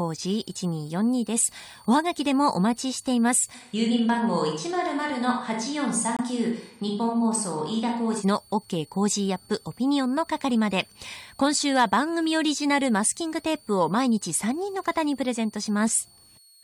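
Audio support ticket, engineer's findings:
Switching supply whistle, whole clip. Thin high whistle wandering between 4.32 and 4.62 kHz. Sits roughly 30 dB under the speech. Source: a switching power supply in or near the chain. Converter drops into an audible burst mode, or beats against a second supply. Pitch wanders as load shifts. Check the supply and grounding.

Switch to a distant microphone, 3.56 to 8.20 s. Speech turns roomy and hollow in an instant. Low end thins out. Level stays about the same. Background noise comes up to roughly 35 dB below the speech. Sharp change in, sharp change back. Likely cause: close mic signal dropped or unselected, with the chain falling back to a farther pickup such as a camera mic. Check lav or headset feed and routing.

Corrupt frame muted, 6.17 to 6.21 s. Abrupt 40 ms gap of pure silence, inside the distant-mic section. Length fits one lost codec frame. 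Mechanism: bit errors in a compressed frame, the decoder rejects it, and the player fills the slot with silence. Timeline stays intact, with no drift after the gap. Check the transport or storage path for bit corruption.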